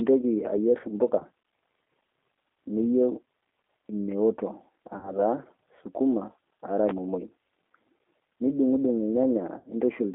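Throughout the clip the speech carries the plainly audible damage of the G.729 codec. The band runs only from about 300 Hz to 3.6 kHz, and the rough, slightly synthetic texture fits its 8 kbit/s model of filter, pitch and a few pulses.

VoIP packet loss concealed by the speech codec occurs at 1.19 to 1.23 s (20 ms lost), 4.97 to 5.16 s and 9.59 to 9.69 s (60 ms each). The decoder stretches the last sound into a buzzy tone or coloured noise that fades, and the speech stays weak or distorted briefly afterwards.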